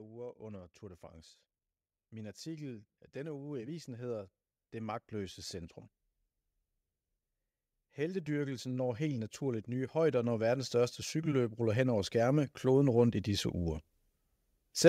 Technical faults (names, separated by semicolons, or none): automatic gain rising